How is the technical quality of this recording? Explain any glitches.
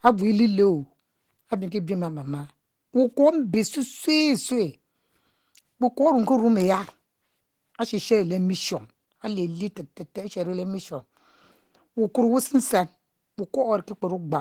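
The recording carries plainly audible codec damage throughout. Opus compression is the likely cause: low-bitrate hybrid coding, perhaps around 16 kbps, makes the speech hoarse and grainy rather than MP3-like swirly, despite content reaching 20.2 kHz.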